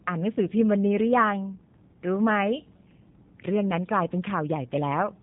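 From start to finish the speech runs through what sounds like the G.729 codec, and the damage is plainly audible. The coder throws away the actual waveform and rebuilds each short frame from a vocal tract filter, a pitch predictor and a handful of pulses, which fits an 8 kbit/s VoIP link. That's why the voice comes out rough and slightly synthetic, and nothing survives above about 3.8 kHz, so the top end sounds clipped off.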